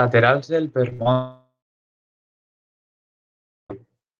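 Speech carried over a call path whose Opus coding at 32 kbps tops out near 12 kHz on a spectrogram breaks up around the one-second mark. Short concealed packet loss at 0.89–0.93 s and again at 1.03–1.07 s leaves brief smears where about 20 ms of audio each time was replaced by a continuation of the preceding sound. On a spectrogram these show as tiny stretches of blurred or repeated harmonics. Between them, a burst of packet loss from 0.93 to 1.01 s drops about 60 ms. The receiver continues the last sound and turns it down, which appears as a shrinking envelope on the waveform. From 1.12 to 3.72 s the audio drops out, most likely a long network dropout. A fading buzz or hiss gives way to about 2.2 s of near-silence, and speech returns with about 2.6 s of the original missing. The waveform goes almost flat across that span, and the spectrogram shows a dark gap.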